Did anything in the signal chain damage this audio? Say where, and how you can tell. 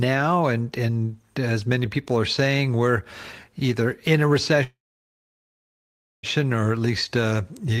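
Yes, a call audio freeze at the network stage. At 4.63 s the speech stops, a brief fading tail gives way to silence, and speech resumes at 6.26 s where it left off. Nothing is missing, just 1.6 s of added delay. Likely held-up packets emptied the jitter buffer.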